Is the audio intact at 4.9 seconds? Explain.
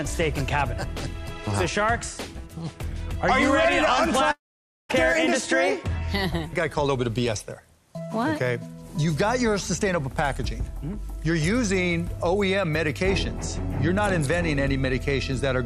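No, a long network dropout runs from 4.31 to 4.91 s. The last sound is stretched into a fading buzz that soon gives way to about half a second of silence, likely because packets stopped arriving, and roughly 0.58 s of audio never returns.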